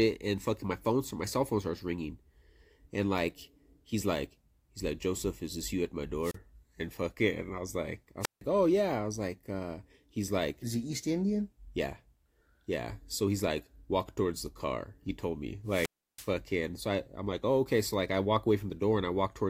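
The speech drops out three times with a wireless microphone squelch dropout. At 6.22 to 6.36 s there's a short rise of hiss and a near-silent gap of about 32 ms. At 8.21 to 8.42 s the hole stretches to about 160 ms. The longest runs from 15.66 to 16.31 s, muted for about 330 ms. Each time the FM radio link fades, the receiver's squelch shuts the output, and the speech comes back once the signal recovers.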